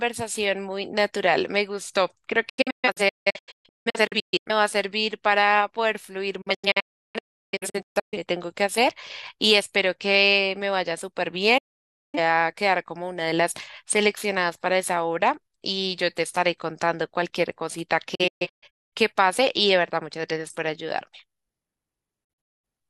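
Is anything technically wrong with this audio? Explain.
Yes. The speech suffers a digital broadcast dropout at five points: 2.49 to 4.51 s, 6.41 to 8.17 s, 11.58 to 12.19 s, 18.15 to 18.93 s, and 22.24 to 22.69 s. The receiver got damaged or missing frames and muted them. Each cut fades out over 8 ms. Most are clusters of short holes, with the longest run at 341 ms. The third is one solid gap of 0.55 s. The missing audio never comes back.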